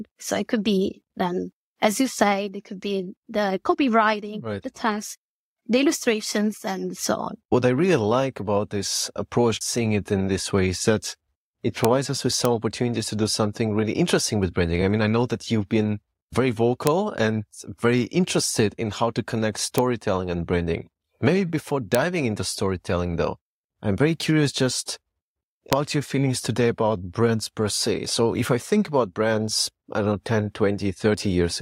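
Sharp, violent cracks break through the speech at 11.85, 12.45, 16.87, 19.78, 21.95 and 25.73 s, harsher than clipping. This is integer overflow: loud peaks reaching the integer limit wrapped to the opposite sign instead of being held there, flipping across the full range.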